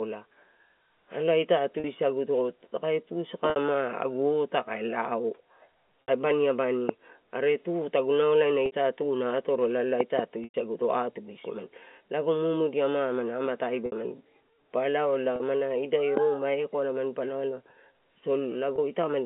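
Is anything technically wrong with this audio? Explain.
Yes. The sound has two kinds of fault, packet loss with pitch repetition and loud pops, heard over a clean telephone band.

Packet loss with pitch repetition occurs at 1.8, 3.5, 6.04, 8.66, 10.44, 13.86, 15.36 and 18.76 s. The gaps last 20 to 100 ms. Most are 40 or 60 ms, and the longest is at 10.44 s. The lengths step in 20 ms units, which fits 20 ms packets. The receiver fills each hole by repeating the last pitch period and fading it. Each gap sounds like a brief buzzy hold on the sound. The 100 ms gap starts to fade before the sound resumes.

The loud pops fall at 6.89 to 6.91 s, at 10.01 to 10.21 s, and at 16.17 to 16.19 s. The middle event is a pair of pops in quick succession. The pops are sharp and far louder than the speech, roughly 15 to 20 dB above it. They are likely sudden voltage steps, such as a switch, static or a driver glitch. 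The circuits after the step shape it into a short click or thump. The sound carries on underneath each pop.

The G.711 telephone coding limits the audio to about 200 Hz to 3.4 kHz, as expected on a phone line.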